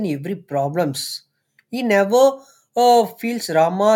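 No technical faults are audible anywhere in the speech. Nothing in the signal draws attention to itself at any point.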